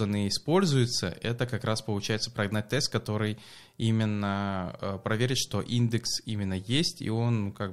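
Listening to this speech recording, nothing technically wrong stood out at any point.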